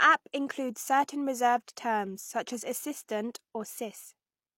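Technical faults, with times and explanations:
throughout, low-bitrate audio saved at a high bitrate: the spectrogram stops at a hard 16.3 kHz ceiling, likely left by an earlier low-bitrate encode that the high-bitrate MP3 cannot restore.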